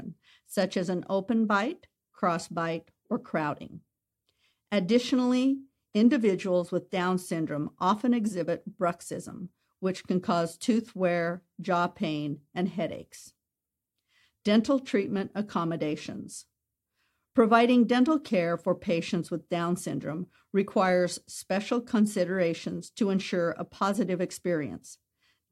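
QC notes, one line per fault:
No faults found in this speech recording. Nothing here calls for a QC entry.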